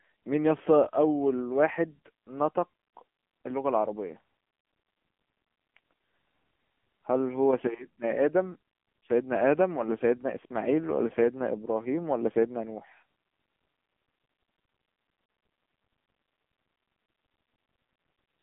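Throughout, the speech went through the AMR narrowband mobile codec at a rate that fits 6.7 kbps, leaving nothing above 3.5 kHz and a heavily buzzy, synthetic voice.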